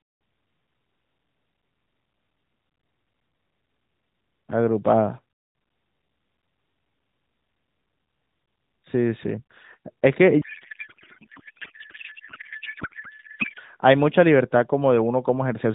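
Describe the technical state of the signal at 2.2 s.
At 2.2 s the signal is intact: the speech runs on without any dropout, click or distortion, carrying only the band-limited, slightly synthetic colour of the AMR narrowband mobile codec, which cuts everything above 4 kHz but leaves the voice clean at this moment.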